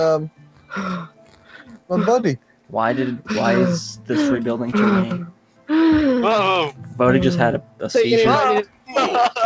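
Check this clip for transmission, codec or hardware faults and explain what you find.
A speech-oriented noise suppressor was left running on non-speech sound. It treats held tones, ambience and decays as noise, so the level swings by roughly 10 dB. Attacks pass while sustained parts sink, giving a pumping, thinned texture across the whole clip.

Sound cut by the noise suppressor occurs at 0.3–0.71 s, 1.08–1.9 s, 2.38–2.71 s, 5.32–5.69 s, 7.62–7.81 s and 8.66–8.89 s. In each stretch the suppressor misjudged steady or fading material as noise and pulled it down by about 11 to 12 dB. Tails are cut short and the sound briefly ducks away. The call path's G.722 coding, which fits a 64 kbps stream, leaves nothing above 8 kHz.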